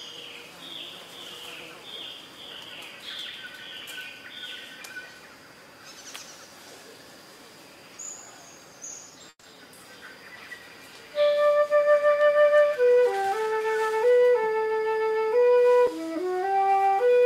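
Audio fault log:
9.29–9.55 s, call audio freeze: the sound stalls and the last moment is stretched into about 140 ms of fading buzz or hiss, then about 40 ms of silence, likely because delayed packets emptied the jitter buffer. Playback resumes where it stopped, so nothing is lost, but it now runs 140 ms later.
13.22–14.12 s, jitter buffer speed-up: playback runs at about 115% speed with unchanged pitch, sounding hurried, as the receiver trims roughly 150 ms in total by cutting many short pitch-period slices to drain an overfull jitter buffer.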